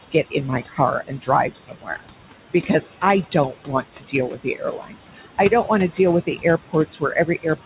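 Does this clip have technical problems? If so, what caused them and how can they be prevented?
Yes. Noise suppressor artifacts run throughout. The background drops by about 17 dB between phrases and rises under speech. Prevent it by using gentler suppression or reducing room noise at the source.

Speech cut by the noise suppressor occurs from 0.12 to 2.08 s, dipping about 19 dB and swallowing roughly 0.7 s of soft sounds. It happens again from 2.66 s to the end, dipping about 18 dB. Prevent it by lowering suppression strength so quiet consonants aren't classed as noise.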